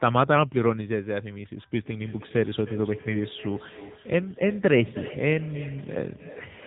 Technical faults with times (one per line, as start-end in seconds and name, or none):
0.00-6.66 AMR narrowband mobile codec